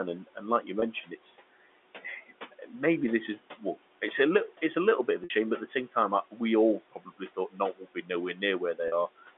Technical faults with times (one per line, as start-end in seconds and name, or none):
0.00-9.38 noise suppressor artifacts
0.80-0.82 packet loss with pitch repetition
2.52-2.73 speech cut by the noise suppressor
5.24-5.30 packet loss with pitch repetition
6.91-8.04 speech cut by the noise suppressor
8.88-8.92 packet loss with pitch repetition